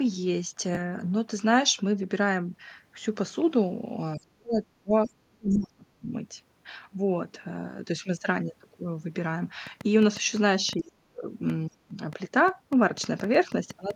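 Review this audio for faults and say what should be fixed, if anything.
A Bluetooth stutter at 0.75 to 0.80 s: a slice of about 15 ms repeats briefly, which fits a single lost or late packet that the receiver filled by replaying its last buffer. Better link margin, less radio congestion, or a larger receive buffer would prevent it.

Speech suppressed in double talk occurs at 4.17 to 6.14 s, 10.77 to 11.26 s and 11.67 to 11.94 s. The talker's level drops by up to about 35 dB in pieces, roughly 1.5 s in total in the first stretch. The likely cause is an echo canceller that ducked both signals while the two sides spoke at once. Better double-talk detection in the echo canceller would prevent it.

The other side's voice leaks through at 5.06 to 5.11 s, at about 40 dB below the speech, and again at 5.50 to 5.58 s, at about 20 dB below. These are short scraps of loudspeaker pickup that the canceller likely failed to remove. 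Lower speaker volume, better acoustic isolation, or a headset would prevent it.

A train of clicks runs from 9.67 to 13.91 s. There are around thirty similar pulses at an uneven 5.7 per second, peaking a few dB above the speech and audible in pauses. Likely sources are electrical interference or a faulty connection or power supply. Shielding, grounding, or replacing the interface and cabling would prevent it.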